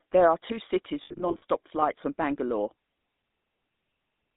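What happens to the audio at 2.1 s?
At 2.1 s the speech carries GSM full-rate codec damage, which runs through the whole clip rather than starting there. The codec models the vocal tract and excites it with a sparse, regularly spaced pulse train, so the voice takes on a buzzy, gravelly roughness. The band is limited to roughly 200 Hz to 3.7 kHz, which removes low warmth and upper clarity. The plainly audible coarseness fits a 13 kbps narrowband link.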